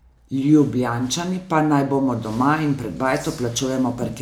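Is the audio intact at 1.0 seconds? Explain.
Yes, the audio is intact at 1.0 seconds, without any dropout, glitch or other audible fault.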